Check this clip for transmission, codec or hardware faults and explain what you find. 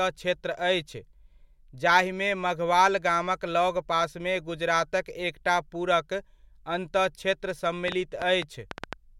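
One fault turns up near the end: a train of clicks from 7.88 to 8.94 s. About seven sharp, similar pops tick unevenly at roughly 6.7 per second, peaking around 15 dB above the speech. A likely cause is interference from nearby equipment or a faulty connection or power supply injecting repeated pulses into the signal path.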